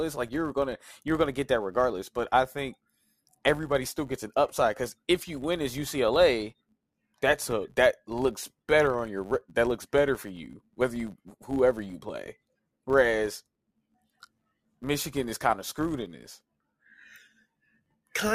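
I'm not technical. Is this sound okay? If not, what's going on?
No. A steady buzz runs under the speech from start to finish, about 100 tiny ticks per second, louder when the speech is louder. It comes from a filter restarted on every block: the processing forgets where it was and starts each short chunk from silence, leaving a small click at every seam.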